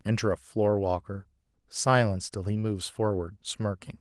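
Nothing technically wrong turns up in this speech recording, which carries only the light coding traces you'd expect from Opus voice compression running in its hybrid fullband mode, consistent with a rate of around 24 kbps.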